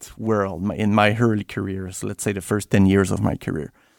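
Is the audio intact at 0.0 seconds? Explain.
Yes, the audio is intact at 0.0 seconds, with no fault audible at that moment.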